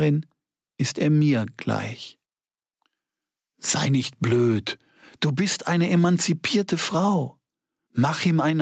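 Gain pumping runs through the whole clip. The gain swings by roughly 10 dB, leaving everything squashed. That's likely a fast limiter clamping down on input gain set far too high. Separately, the top end stops around 8 kHz, which fits a call codec such as Opus running at about 40 kbps.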